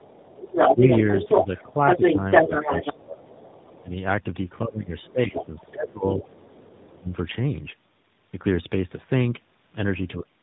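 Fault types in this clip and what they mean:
tandem speech coding: The call passed through GSM full rate, then G.711 A-law, then AMR-NB at 12.2 kbit/s. The speech was decoded and re-encoded by two low-rate speech coders in a row. Each pass roughens the last, leaving muffled, warbly speech with nothing above 3.8 kHz.
other side's voice leaking through: The far end's audio was likely played on the talker's loudspeaker and not fully removed by the echo canceller. A second voice runs under the first 3.82 s, louder than the talker. It returns faintly from 5.03 to 5.7 s and from 6.09 to 6.25 s.
speech suppressed in double talk: With both sides talking at once, the echo canceller likely could not tell the talker from the echo and turned both down. The talker's speech dips at 0.73 s, from 1.39 to 3.31 s, and around 3.8 s, with the deepest cuts roughly 20 dB.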